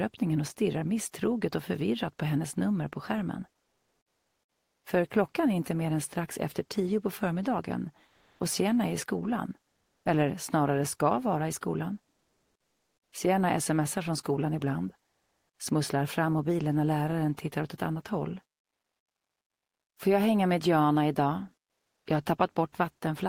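Comfort noise replaces the background in five pauses: 3.61–4.83 s, 8.07–8.39, 9.71–10.05, 12.15–13.13 and 15.09–15.59 s. The real background turns into steady, featureless hiss, shifting level by about 7 to 13 dB. Likely cause: Opus discontinuous transmission.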